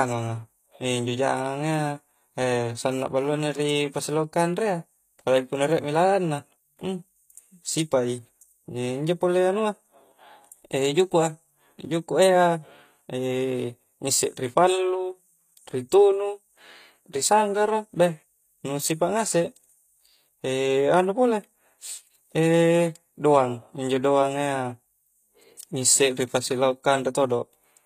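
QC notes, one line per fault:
Throughout, HE-AAC compression: the upper range of this speech sounds plainly artificial, with s sounds turning gritty, metallic or lispy. The likely cause is a low-rate encoder rebuilding treble by copying lower bands upward, so harmonics misalign; it fits roughly 24 kbps.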